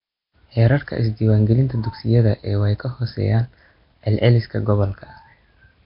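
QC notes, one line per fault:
throughout: Nellymoser compression. The speech sounds rough and hissy, with a smeared, underwater quality that never lets up, and it is dull because nothing reaches above 5.3 kHz. The likely cause is Nellymoser Asao, the old Flash microphone codec, coding at a low rate that fits roughly 22 kbps. Its fixed two bits per sample leave weaker bands unfunded and filled with noise, which produces the grainy halo and heavy, blurred damage.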